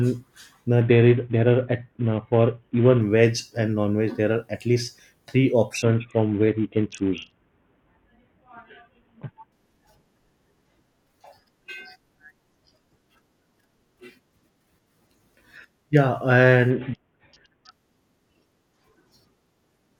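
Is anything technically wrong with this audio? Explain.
Yes. From 0.81 to 3.01 s, 5.82 to 9.52 s and 16.70 to 17.71 s the speech turns dull and gritty, then clears. This is a Bluetooth SBC bit pool drop. The sound fits the link falling from bit pool 28 to 5, near 54 kbps, starving the upper sub-bands and coarsely quantising the rest.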